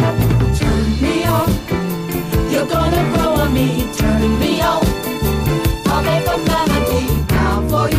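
Nothing stood out on listening to this audio.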